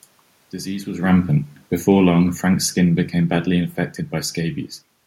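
Automatic gain falling runs from 0.92 s to 4.4 s in this speech recording. The gain control found the input too loud, or its background noise too strong for its starting gain, and backed its gain off slowly, pulling the whole signal down by about 6 dB across that span. The room noise sinks along with the speech, which marks this as a gain change; separately, the talker also shifts position near the microphone around one second in.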